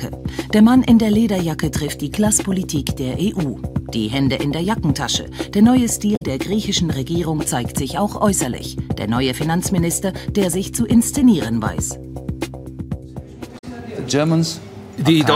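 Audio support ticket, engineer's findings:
Damaged data in a compressed stream at 6.15–6.22 s and 13.57–13.64 s. Corrupt frames in the file or transport; decoder misreads them, loses sync, hunts for next frame header. Heard as a short blip or squawk, about 70 ms each.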